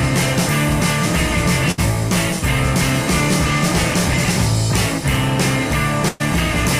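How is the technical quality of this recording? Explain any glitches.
There are two glitches, both bursts of packet loss, where a short stretch of audio never arrived in time and the receiver had to cover for it.

The first runs from about 1.71 to 1.80 s. For roughly 62 ms you hear the last bit of sound stretched out and fading, a held buzz or soft hiss depending on what came just before, and then playback jumps ahead, skipping about 60 ms. The second, from 6.08 to 6.22 s, is longer: the concealment stretches for about 114 ms before resuming, with roughly 120 ms of the original lost.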